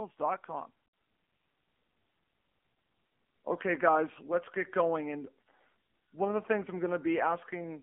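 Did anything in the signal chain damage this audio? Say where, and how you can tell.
Yes, at the codec stage: the whole clip has passed through the AMR narrowband mobile codec. The speech sits in a 200 Hz to 3.4 kHz telephone band with nothing above 3.5 kHz. The model-based coding damage is plainly audible, which fits a low mode around 7.4 kbps.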